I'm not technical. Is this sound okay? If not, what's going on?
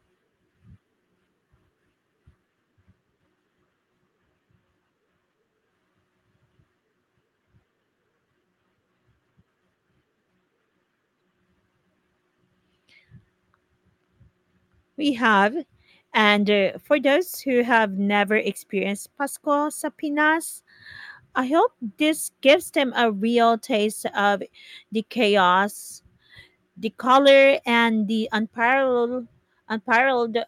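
Yes, this sound is okay; it came through an online call connection that is working as it should, so nothing is going on.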